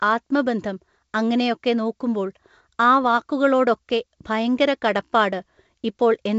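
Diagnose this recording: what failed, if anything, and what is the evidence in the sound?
Bit errors on an ADPCM link, in the transmission stage. Rough, popping bursts with brief level jumps appear from 3.04 to 3.18 s, just after "ആത്മബന്ധം അങ്ങനെയൊക്കെ നോക്കുമ്പോൾ ആ", and from 5.40 to 5.46 s. Each flipped bit derails the G.722 decoder's step size and predictor, so the disturbance rings on briefly.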